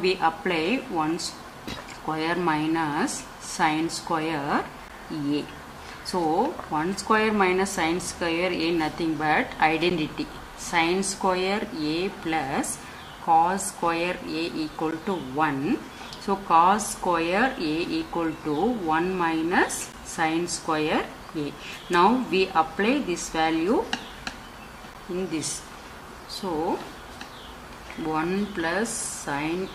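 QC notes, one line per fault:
4.88, 9.90, 14.91, 19.92 and 24.94 s: gap between chunks. The audio was delivered in 5-second blocks, and each join leaves about 13 ms of silence inserted between one block's end and the next one's start, from padding or late playback of each new chunk. Nothing is dropped, but the sound stops dead and restarts at every join, so you hear a brief hard-edged hole recurring like clockwork every 5 s.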